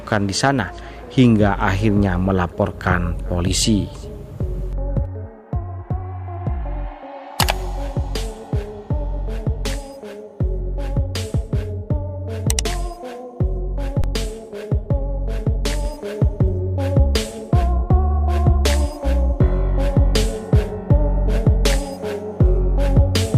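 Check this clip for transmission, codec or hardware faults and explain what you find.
One fault is present: an underrun with held sample from 14.02 to 14.04 s. The output buffer ran dry for about 21 ms, a gap of 1024 samples, and the converter froze on its last value. The waveform flattens, the sound stops abruptly, and roughly 20 ms of live audio was lost before it resumes.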